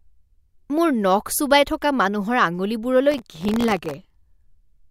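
Processor overload crackle runs from 3.12 to 3.94 s in this speech clip, a gritty tearing laid over the sound for just under a second before it clears. The processor falls behind on very short audio buffers, each well under a millisecond, and misses around forty deadlines in quick succession. Each time, a scrap of old audio is replayed with hard edges, and the rapid string of those splices is heard as crackle.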